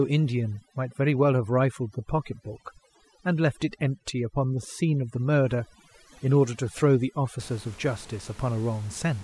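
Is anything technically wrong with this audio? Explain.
Yes. From the start to about 7.39 s, the background in the pauses drops and breaks up into twinkling, warbling specks. This is overdone noise removal. The noise reduction was set too strong, so every frequency band that came close to its noise estimate was pulled far down or cut out. The room noise, sitting about 23 dB below the speech, was pulled down and broken up, and the quieter parts of the voice went with it.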